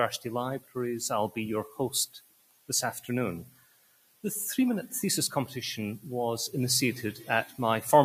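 A noise suppressor meant for speech is applied to music or sounds across the whole clip. It mistakes sustained material and ambience for noise, so gain swings by roughly 20 dB: onsets pass while held tones and decays sink, giving a pumping, thinned texture. Sound is cut by the noise suppressor at 0.60–0.76 s (about 14 dB down), 2.06–2.69 s (about 18 dB), 3.44–4.24 s (about 18 dB) and 7.13–7.59 s (about 11 dB). In each span, steady or fading sound dips or its tail is truncated.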